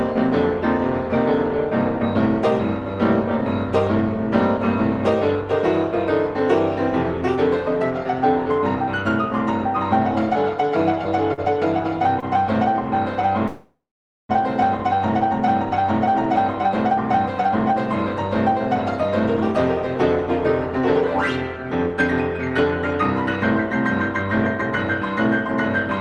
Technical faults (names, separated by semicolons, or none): short stall from a late packet; call audio freeze; jitter buffer speed-up